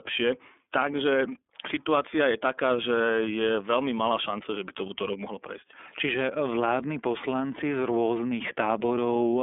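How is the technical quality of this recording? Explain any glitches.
The technical quality is limited by one fault that runs through the whole speech clip: narrowband iLBC codec coding with plainly audible damage.

iLBC codec, throughout the clip: each block of the signal is coded independently of the one before. The roughness fits 30 ms frames at around 13 kbps. Only roughly 250 Hz to 3.5 kHz survives, so the speech sounds thin and muffled, with no low body or upper clarity, and carries a grainy, slightly synthetic rasp.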